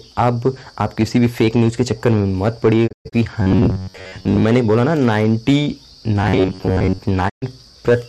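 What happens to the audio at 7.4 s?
Right around there the sound drops out. From 7.28 s to 7.44 s you get a digital broadcast dropout: the receiver lost the signal or stopped trusting the frames, so it muted until clean data came back. It fades down over about 20 ms, sits silent for roughly 120 ms, which fits about five lost frames, and then picks up again. Whatever was sent in that gap is simply gone.

That stretch also carries the hard clipping that runs through the whole clip. The level is pushed about 5 dB past what the signal path can pass, so the loudest peaks get sliced flat. Only a small share of the waveform, around 2 percent, actually hits the ceiling, so it comes across as crackle and grit on the peaks, not a constant fuzz.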